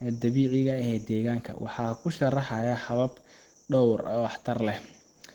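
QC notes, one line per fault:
Throughout: Opus compression. The speech sounds hoarse, grainy and somewhat muffled, likely from an Opus encoder in its hybrid mode at a low rate near 16 kbps. A spectrogram shows energy up to 20 kHz.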